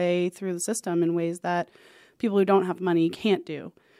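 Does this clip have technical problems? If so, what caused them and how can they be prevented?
No, no technical faults heard.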